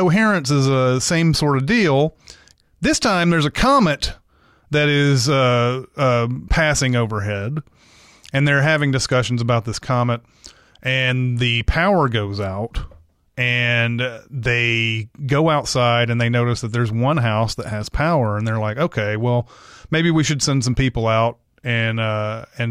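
No technical faults can be heard anywhere in the speech.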